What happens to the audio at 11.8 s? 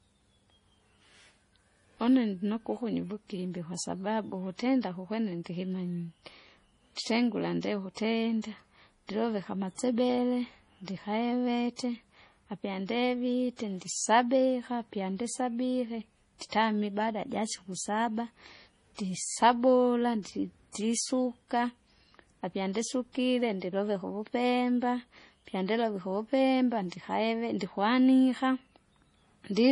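At 11.76 to 11.79 s a sharp attack in the speech is preceded by pre-echo: a short hiss that arrives about 28 ms before the onset, so the attack sounds soft and smeared. A transform codec spreads its quantisation noise across the whole block it codes, and noise sized for the loud attack spills into the quiet just before it. Unlike a click or a dropout, this is a brief wash of noise that leads the transient and is tied to it.

Over this same moment, and through the whole clip, the sound carries heavy damage that likely comes from MP3 compression at a low bitrate, fitting roughly 32 kbps. Nothing is present above 10.5 kHz because the encoder cuts the treble at a fixed point. Weak frequency lines drop in and out between frames, giving a watery, swirling texture with metallic chirps on s sounds. What sets this apart from ordinary low-pass filtering is that swirl: a filter alone removes treble cleanly, but it doesn't make the remaining sound flicker.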